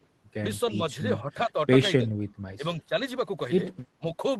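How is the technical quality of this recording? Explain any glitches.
The recording has five brief moments where the speech is pulled down, heard over the band-limited sound of an Opus call, with audio reaching up to about 12 kHz.

At 1.22–1.56 s, 2.03–2.15 s, 2.56–2.64 s, 2.80–2.94 s and 3.98–4.20 s the speech dips or nearly drops out, from about 5 dB to about 25 dB down. This is likely speech suppressed in double talk: with both sides talking, the echo canceller took the voice for echo and attenuated it.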